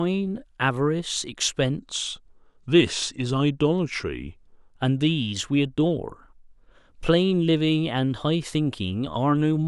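Wrong sample rate from 1.79 s to 4.72 s: the speech slows and drops in pitch together, running at about 0.92 times normal speed and sitting roughly 1.5 semitones low, so the voice sounds heavier and slightly dragged. Speed and pitch shift by the same ratio because the samples are played out at a lower rate than they were captured at, with no conversion, which fits 48 kHz material played at 44.1 kHz.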